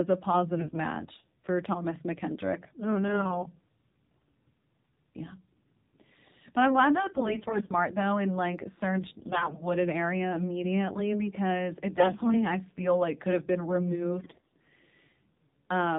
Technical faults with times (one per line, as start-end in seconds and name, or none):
0.00-15.98 AMR narrowband mobile codec
0.58-0.80 AMR bit errors
3.08-3.45 AMR bit errors
7.14-7.76 AMR bit errors
9.18-9.63 AMR bit errors
11.98-12.51 AMR bit errors
14.20-14.55 AMR bit errors